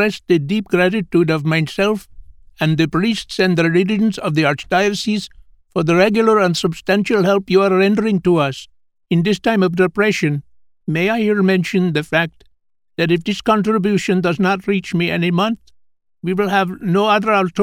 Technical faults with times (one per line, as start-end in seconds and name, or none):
none